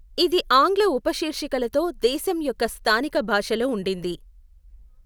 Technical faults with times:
none

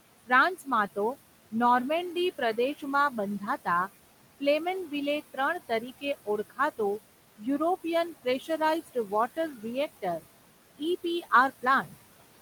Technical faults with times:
0.00-12.41 noise suppressor artifacts
0.26-0.97 speech cut by the noise suppressor
2.15-6.79 speech cut by the noise suppressor
8.24-10.24 speech cut by the noise suppressor
10.78-12.41 speech cut by the noise suppressor

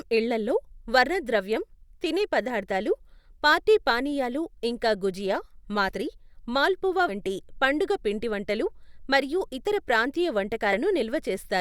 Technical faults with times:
5.88-5.94 compressed frames skipped
7.08-7.12 compressed frames skipped
10.72-10.77 compressed frames skipped

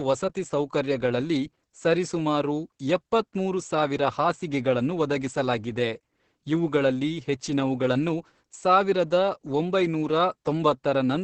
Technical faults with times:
0.00-11.23 Opus voice compression

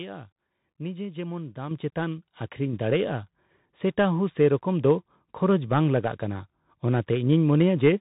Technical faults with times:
0.00-8.01 Bluetooth CVSD headset codec
1.71 microphone volume stepped up
2.73 microphone volume stepped up

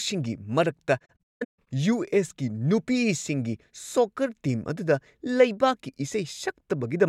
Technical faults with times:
0.99-1.67 AAC frame loss with muting

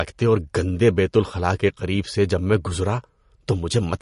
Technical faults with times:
0.00-4.01 MP3 compression

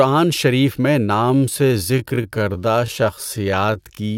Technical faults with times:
1.18-4.17 time-stretched section

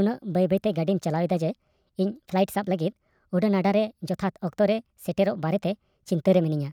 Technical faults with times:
0.00-6.72 wrong sample rate

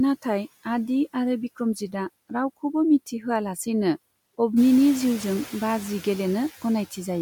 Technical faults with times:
0.00-7.21 noise suppressor artifacts

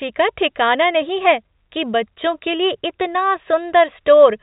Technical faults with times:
none

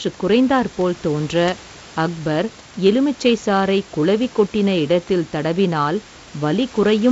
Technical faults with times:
none

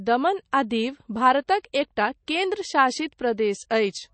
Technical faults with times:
0.00-4.14 MP3 compression
3.69 pre-echo

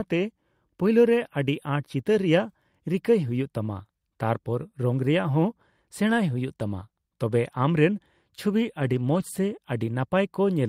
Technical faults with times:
8.81-9.38 lost packet rebuilt from error correction

